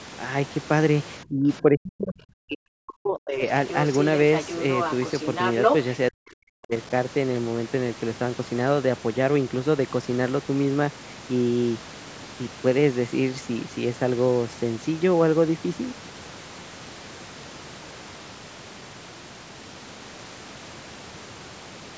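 From 1.23 to 3.43 s, the echo canceller likely could not tell the talker apart from loudspeaker echo while both sides spoke at once, so it turned both down. The result is speech suppressed in double talk: the speech dips by as much as roughly 40 dB and breaks up across about two seconds. At 3.69 to 4.06 s, the canceller likely left part of the loudspeaker signal in the microphone feed, so the other side's voice leaks through as a faint scrap well below the talker. It returns from 4.33 to 5.85 s, likely from the same incomplete echo removal, this time only slightly quieter than the speech and lasting about a second and a half. From 6.1 to 6.72 s, double-talk suppression likely cuts in again, pulling the speech down by roughly 40 dB in a brief, choppy gap. Throughout, the call microphone processing limits the audio to 8 kHz and below.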